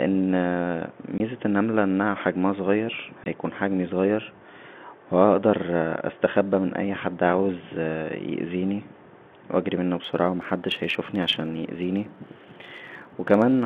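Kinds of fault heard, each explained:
Packet loss filled with silence: two lost packets leave 20 ms holes of silence, at 1.18 to 1.20 s just before "النمله انها حجمها صغير" and at 3.24 to 3.26 s before "هيكون حجمى صغير". Each has hard edges and stands alone, with no repeating buzz.
Block size mismatch (truncated): from 10.03 s, after "و اجرى منه", to the end, the tail of every block is thrown away. This gives a steady buzz near 92 Hz at the block rate. Speed barely changes, since the sizes nearly match.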